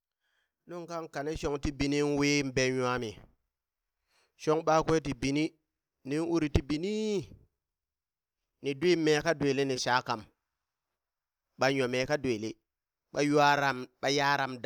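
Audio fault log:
No technical faults are audible in this recording.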